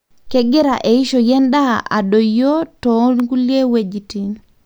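At 3.20 s a single sharp snap cuts across the speech, a click lasting about a millisecond and peaking around -10 dBFS. It is an electrical switching spike: the abruptness and brevity point to a short arc, likely from a nearby switch, motor or static discharge, being picked up by the audio line and added on top of the recording rather than arising from the speech itself.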